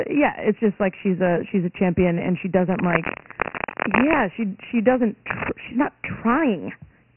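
From start to finish the speech sounds narrow and gritty, with a rough hiss riding on every syllable and nothing above 3 kHz. This is Dialogic VOX ADPCM, heavily damaged: a 24 kbps rate fits 4-bit samples at 6,000 per second, which caps the band.

From 2.71 to 4.20 s, and again briefly from 5.30 to 5.50 s, dense uneven scratching and rustling sits over the speech at about the same loudness. This cable scratch noise is likely a worn cable or connector shifting, its contact resistance changing rapidly.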